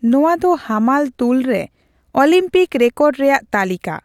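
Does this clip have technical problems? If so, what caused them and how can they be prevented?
No, there are no technical problems in this clip.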